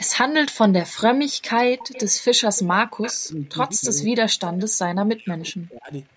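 From 1.44 to 2.6 s a faint, delayed copy of the speech trails the original by about 229 ms, roughly 20 dB down. This is echo leak, likely from a far-end loudspeaker whose echo canceller let part of the microphone pickup back into the call. It recurs at 3.02 to 3.24 s (about 15 dB down), 3.84 to 3.88 s, 4.52 to 4.65 s and 5.4 to 5.49 s (about 20 to 25 dB down). On a spectrogram each scrap shows as weaker harmonic bands repeating the preceding pattern shifted 229 ms to the right, all within the band that stops at 8 kHz.

Between 3.25 and 4.15 s the speech itself drops out in pieces, about half a second in total, falling up to about 30 dB. This is speech suppressed in double talk, likely caused by the canceller failing to tell the talker from the returning echo and attenuating both. A deeper episode follows from 4.67 to 5.92 s, about a second in total with dips near 40 dB. The waveform shows abrupt notches in the envelope, and the spectrogram shows vertical gaps where the energy vanishes.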